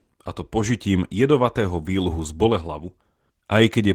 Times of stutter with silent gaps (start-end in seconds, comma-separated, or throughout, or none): none